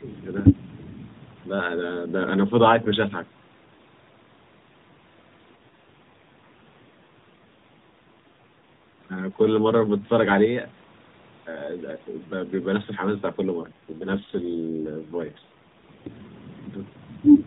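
Speech carried over an AMR narrowband mobile codec, band-limited to 4 kHz with light coding colour, shows two kinds of fault. In the first 40 ms, from 0.00 to 0.04 s, the level dips by about 15 dB. This is speech suppressed in double talk, likely from an echo canceller that could not separate the near talker from loudspeaker echo while both sides were active and attenuated the whole signal. The second fault is an AMR rate drop, heard twice, from 5.56 to 9.00 s and from 13.62 to 16.13 s. The bandwidth stays the same and there is no gap, but the speech turns rougher, buzzier and more synthetic. That fits the network ordering a step down from the 12.2 kbps mode to 5.9 kbps on a weak radio link, spending fewer bits on the vocal-tract model and more on error protection. Quality returns when the rate goes back up.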